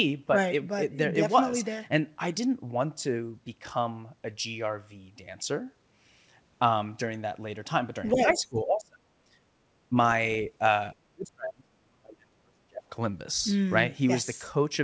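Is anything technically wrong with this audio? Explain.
Yes. The speech shows two related problems, both of which point to an echo canceller struggling with a loudspeaker in the room.

From 8.12 to 8.21 s, the other side's voice leaks through: a brief scrap of a second voice, about 10 dB below the main speech. It is likely residual echo, meaning the far end's audio played on the talker's loudspeaker, picked up by the microphone and not fully cancelled. It differs from ordinary background talk because it is short, and it arrives exactly as the talker's own level starts to collapse.

Speech is suppressed in double talk at 8.13 to 9.08 s, where the drop reaches roughly 30 dB over about a second. A light dip of about 10 dB follows at 9.89 to 9.95 s. The deepest loss runs from 10.98 to 12.82 s, down roughly 35 dB across about one and a half seconds. The likely cause is both sides talking at once, so the canceller turns down everything it cannot separate from echo. 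Packet-loss dropouts are abrupt gaps or glitches. These are gain dips that pump the voice down and back up.

The call path's bandwidth, with nothing above 8 kHz, fits a G.722 wideband link.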